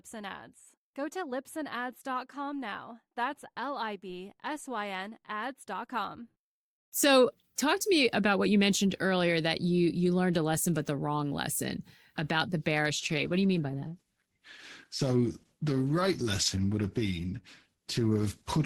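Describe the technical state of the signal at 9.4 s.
At 9.4 s the speech signal is intact, with no audible dropout, distortion, glitch or other technical fault.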